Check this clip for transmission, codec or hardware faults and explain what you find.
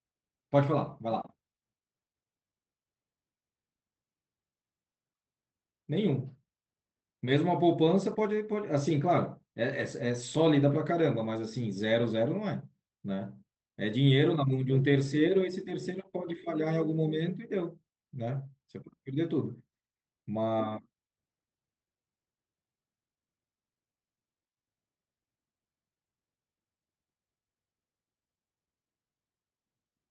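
No transmission, codec or hardware faults are audible here.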